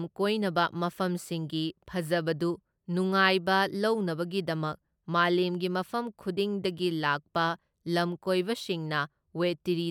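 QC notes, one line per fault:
No faults heard in this speech recording.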